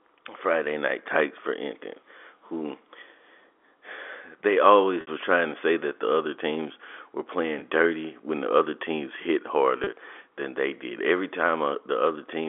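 At 5.01 s, 7.59 s and 9.84 s there is packet loss with pitch repetition: the receiver filled each gap by repeating the last pitch period. The 60 ms gap, which fits two lost packets, fades into silence before the speech returns with a short cross-fade. The 30 ms gaps are briefer blips that sound slightly held and buzzy.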